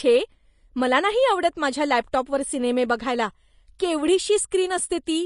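Speech running the full clip was likely encoded with Vorbis compression at a low bitrate, around 33 kbps. The high-frequency cut-off is lowered, and the coarsely quantised treble sounds hissy and grainy throughout.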